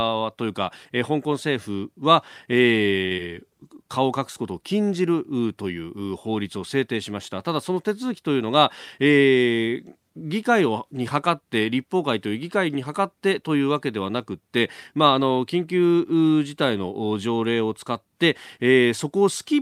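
Speech, with two closely spaced network faults. From 3.05 to 3.13 s there is a short stall from a late packet: the jitter buffer ran dry, so the receiver held the last sound for 54 ms until the data arrived, then resumed from the same point. Nothing is lost, but playback falls 54 ms further behind, and the held sound is audibly stretched. Between 3.17 and 3.30 s there is short concealed packet loss: 20 ms of audio never reached the decoder, and the receiver covered the gap with 11 ms of synthesized continuation before blending back, adding roughly 10 ms. The result is a brief smear or wobble where that stretch of speech is missing.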